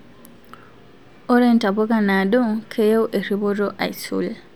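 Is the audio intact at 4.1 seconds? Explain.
Yes, at 4.1 seconds the speech runs through cleanly, with no fault to be heard at that moment.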